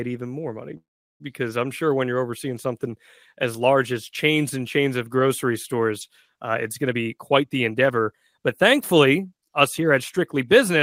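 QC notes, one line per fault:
0.77–1.22 s, call audio freeze: the speech stalls here and what fills the gap is the last bit of sound stretched into a short buzzy tail that fades out, then about 370 ms of near silence before things pick up exactly where they left off. So nothing's lost, just a gap of about 0.43 s wedged in, which pushes everything after it later. The likely cause is packets getting held up in transit and the jitter buffer running dry while it waited.
6.88–10.70 s, jitter buffer speed-up: from here to nearly the end the talker sounds hurried, running at roughly 111% speed with no change in pitch. That's the receiver clawing back the delay built up earlier. It had more audio queued than it wanted, so it kept snipping out tiny pitch-period-sized chunks, something like 0.4 s in total across the stretch, which tightens the timing and squeezes the rhythm without making anything sound squeaky.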